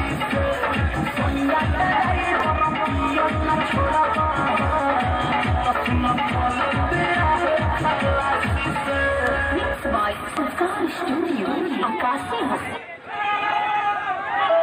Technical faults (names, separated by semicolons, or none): loud pop